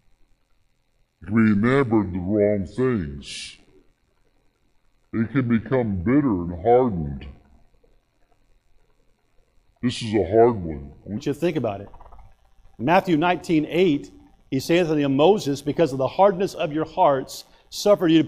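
From 0 to 11.17 s the audio runs as a section at the wrong speed, 0.691 times normal and about seven semitones deeper, with tempo and pitch dropping together, unlike a pure pitch shift. The likely cause is a mismatched playback clock.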